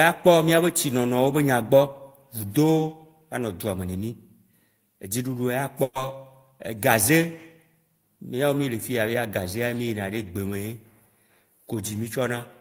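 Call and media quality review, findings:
Burst of packet loss at 5.83–5.98 s: about 120 ms of consecutive packets lost in the network path, concealed by extending and fading the last speech, then resuming with that stretch missing.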